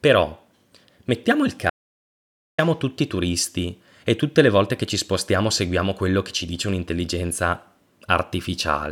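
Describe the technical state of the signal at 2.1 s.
At 2.1 s the signal sits inside an audio dropout to silence running from 1.70 to 2.58 s, so about 0.88 s of speech is simply missing. The input was likely lost for that stretch, with the recording chain carrying on and writing silence. Unlike a natural pause or a noise gate closing, the room tone vanishes along with the speech, and both edges are abrupt cuts rather than fades, so the gap is dead silence.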